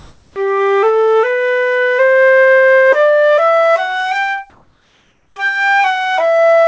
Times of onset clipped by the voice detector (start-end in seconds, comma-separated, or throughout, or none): 0.32-0.36